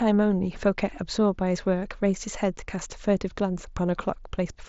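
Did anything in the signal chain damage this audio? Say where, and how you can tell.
No, nothing in the chain has damaged this speech. It has passed through a Bluetooth mSBC headset link: the band stops at about 8 kHz and the louder passages carry a faint graininess, which fits that wideband codec at a bitrate near 61 kbps.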